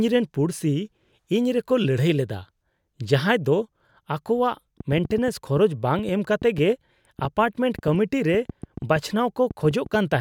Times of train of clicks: 4.80-10.15

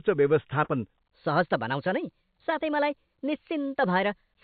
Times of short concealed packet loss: 0.64-0.70

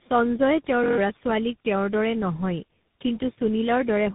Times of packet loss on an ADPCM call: none

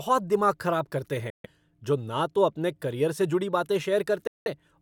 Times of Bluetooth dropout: 1.30-1.46, 4.27-4.48

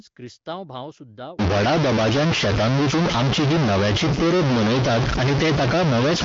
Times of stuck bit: 1.39-6.25

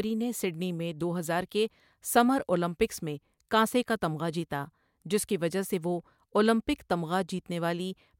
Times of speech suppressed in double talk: none

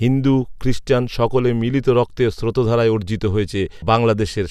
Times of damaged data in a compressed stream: 3.82

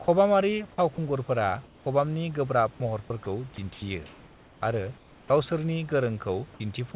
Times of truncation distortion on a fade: none

